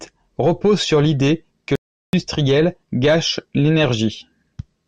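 A playback stall cuts this speech clip to silence from 1.75 to 2.13 s, right after "repose sur l’idée que", for about 380 ms. The likely cause is the player running dry of buffered data or its audio thread being blocked before output resumes.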